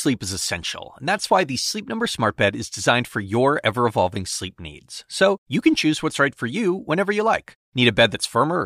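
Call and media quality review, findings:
No technical fault detected in the speech signal; level, continuity and timing all hold steady with no dropouts, distortion or transport errors audible.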